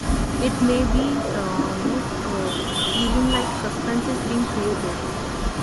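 Across the whole clip the speech carries a grainy, breathy edge in its upper range, where fine detail has been swapped for filled-in noise. That is likely Bluetooth LC3 compression, the LE Audio transform codec working in 10 ms frames, with damage plainly audible at a rate that points to around 48 kbps. Unlike a simple low-pass band limit, the top end is still present, but it hisses instead of ringing clearly.

From the start at 0.00 s right to the end at 5.62 s, a second copy of the speech trails the first by 261 ms, only a little quieter than the original. This is an echo leak, most likely from a far-end loudspeaker whose echo canceller let part of the microphone pickup through. The fixed quarter-second lag and the separate repeat set it apart from room reverberation, which smears into a continuous tail.

At 2.85 s and again at 5.25 s there is a brief 10 ms glitch, each one a single lost LE Audio frame. 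The decoder refilled the gap from the previous spectrum with scrambled phase, so instead of a click or a hard dropout to silence, each loss shows up as a tiny noisy smudge.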